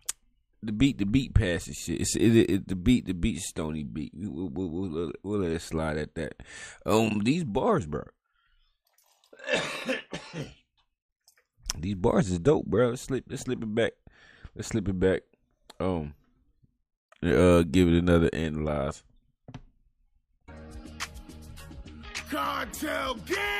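No technical faults can be heard anywhere in the recording. Nothing in the sound calls for a timestamp or any comment on how it was captured or carried.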